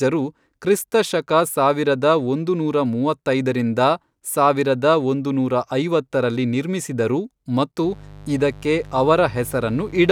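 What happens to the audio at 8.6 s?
At 8.6 s the speech sits under a mains buzz that starts at 7.84 s, right after "ನೂರಾ ಐವತ್ತರಲ್ಲಿ ನಿರ್ಮಿಸಿದರು ಮತ್ತು", and runs to the end at 10.11 s. Sharp switching spikes from the 50 Hz supply leak into the signal twice per cycle, producing a steady, raspy buzz roughly 20 dB below the speech. On a spectrogram it appears as evenly spaced horizontal lines at multiples of 50 Hz reaching into the kilohertz range. The waveform shows small spikes repeating every 10 ms.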